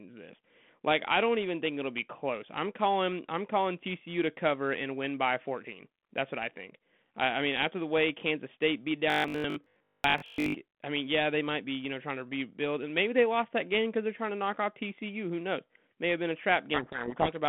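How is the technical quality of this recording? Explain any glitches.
Two glitches stand out on this telephone-band speech recording, which runs through G.726 at what sounds like 32 kbit/s, with only light codec damage and a 200 Hz to 3.5 kHz band.

From 9.10 to 10.54 s, just before "I mean yeah they", the speech turns into a robotic sound, likely from repeated short buffers. Fresh audio stops arriving often enough, so the playback side keeps looping the last chunk and skips the real audio. Most of that stretch is repeats. The loop imposes a steady 50 Hz buzz, which fits a 20 ms buffer, and the speech comes out rigid and metallic while loosely tracking its shape.

From 16.74 to 17.37 s, right after "have been a", there's a codec payload misread. The two ends disagree on the bit order of the G.726 code words, so the decoder takes in plausible-looking data but reads each code word's bits in the wrong order. 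The result is speech buried under harsh, grinding distortion for that last stretch of the clip.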